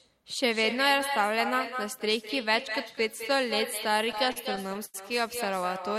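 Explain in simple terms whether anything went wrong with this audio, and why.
Two things went wrong here. The first is echo with no canceller, and it runs through the whole clip. The person on the other end had the call on a loudspeaker, their microphone picked it up, and nothing stripped it out. So every bit of speech comes back roughly a fifth of a second later as a quieter, thinner copy, like a shadow behind each phrase.

The second is repeated stalls (stutter), between about 3.91 and 4.96 s. In that stretch the audio arrived late or too slowly, so the playback kept running out and had to stretch the last bit of sound to fill in. It happens in ten short hiccups, the longest about 89 ms, adding up to about 0.2 s of filler. Nothing is actually lost, but that second drags and stutters.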